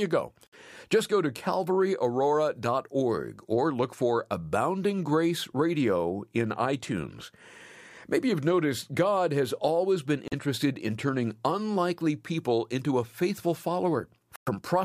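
The speech drops out three times: at 0.47 to 0.54 s with about 60 ms of silence, at 10.28 to 10.33 s between "has always been" and "in turning unlikely people" with 39 ms, and at 14.36 to 14.49 s with 111 ms. Each gap cuts hard to silence, then the audio resumes. This is likely a Bluetooth stall, where held-up packets let the headphone buffer run empty until retransmissions arrived.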